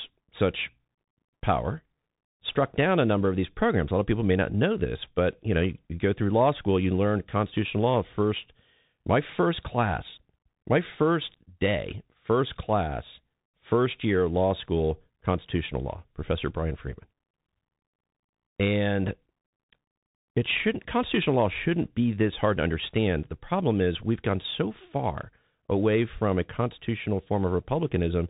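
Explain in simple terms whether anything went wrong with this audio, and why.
The speech runs through a Bluetooth CVSD headset codec from start to finish. This codec sends sound one bit at a time, each bit only saying whether the signal went up or down, with the step size adjusting as it goes. Nothing above about 3.8 kHz survives, so the speech sounds muffled and phone-like. The steps can't keep up with sharp, bright sounds, so s sounds turn scratchy, and a grainy hiss sits under the speech throughout.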